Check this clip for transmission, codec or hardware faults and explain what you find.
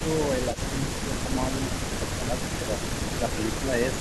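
Two faults are audible in the speech: repeated speech suppressed in double talk, and one brief echo leak.

Speech suppressed in double talk occurs at 0.00–0.08 s, 0.38–0.78 s, 1.02–2.39 s, 2.57–2.80 s and 3.16–3.84 s. The level dips by about 15 dB in the first event and about 10 dB in the others. The dips come in patches. The likely cause is an echo canceller that could not tell the near talker from loudspeaker echo while both sides spoke, so it attenuated everything.

An echo leak appears at 0.52–0.57 s, inside the second suppression window. A faint, short delayed copy of the voice sits about 20 dB below the speech, lagging it by 320 ms. This likely comes from a loudspeaker path whose echo canceller left a residual of the microphone pickup, which was then sent back down the line.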